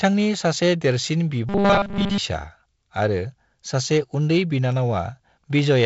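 Robotic sound from repeated short buffers, from 1.49 to 2.18 s: the speech becomes a rigid, metallic buzz fixed at 200 Hz. This likely comes from new audio arriving too seldom, so a roughly 5 ms snippet loops while essentially all fresh audio is skipped.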